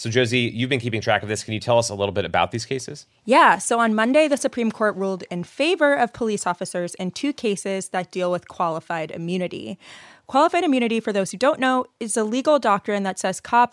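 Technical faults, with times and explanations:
No technical faults are audible anywhere in the recording.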